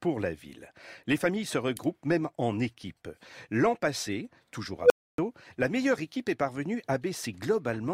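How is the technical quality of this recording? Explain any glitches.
An unstable filter disrupts the speech at 4.81 s, just after "passé toujours". A tone near 500 Hz swells within about 90 ms and clips as the filter's feedback runs away. Then its output overflows and cuts to silence for about 280 ms, ending at 5.18 s, before "la meilleure équipe".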